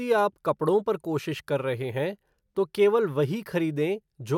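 The speech recording has no audible technical faults anywhere in the clip.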